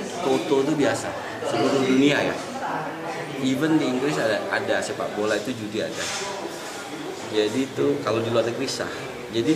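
No technical fault can be heard anywhere in the audio. There is nothing in the sound that calls for a time or a cause to be given.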